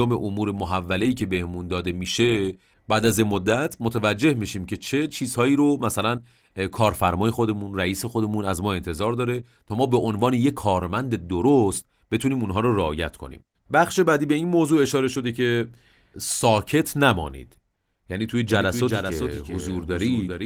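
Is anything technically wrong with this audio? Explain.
Yes, there's a doubled audio track in the last couple of seconds. From 18.49 s to the end, a second full-band copy of the speech runs roughly 400 ms behind the original and about 5 dB quieter. It kicks in abruptly, with no decay or room colour, so it reads as a hard, dry echo. That likely comes from the audio being captured a second time through a slower path. The light Opus voice coding underneath is unaffected.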